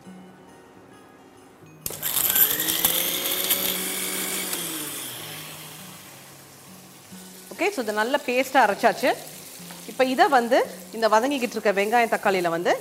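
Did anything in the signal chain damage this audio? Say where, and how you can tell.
No, nothing stood out on listening that would point to damage at any stage of the chain.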